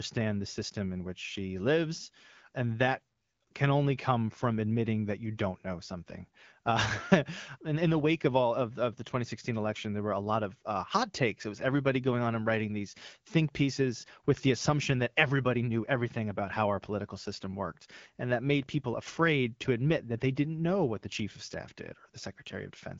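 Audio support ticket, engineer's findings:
Nothing stood out on listening to this speech clip carried over AMR wideband (HD Voice) at 12.65 kbit/s.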